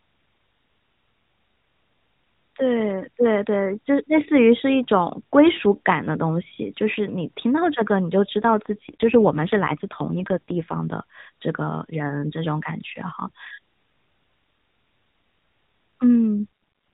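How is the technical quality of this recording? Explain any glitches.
The recording is narrowband mobile speech, with nothing above 4 kHz, and it has two AMR rate drops. From 8.39 to 10.98 s, and again briefly from 16.36 to 16.46 s, the link appears to force the AMR codec down from the 12.2 kbps level its normal sound suggests to something nearer 5.9 kbps. Fewer bits go to the voice model and more to error protection. The band and timing stay intact, but the voice turns rougher, buzzier and more synthetic until the rate recovers.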